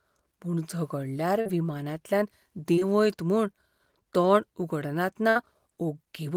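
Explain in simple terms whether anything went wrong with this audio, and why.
Brief smears or wobbles at 1.41 s, 2.75 s and 2.79 s are short concealed packet loss: tiny pieces of the call arrived late, so the receiver patched each gap by stretching the sound just before it.

From 5.29 to 5.37 s the sound becomes a fading held buzz or hiss, then jumps ahead. This is a burst of packet loss: about 60 ms went missing in a row.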